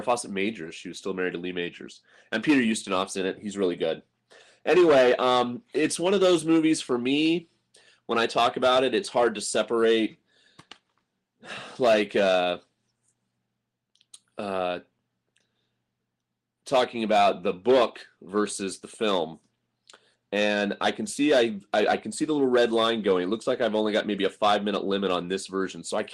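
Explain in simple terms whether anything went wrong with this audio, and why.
Nothing went wrong with this recording; there are no dropouts, glitches or distortions anywhere in it. What you hear is the sound as it was captured, with nothing added or broken along the way.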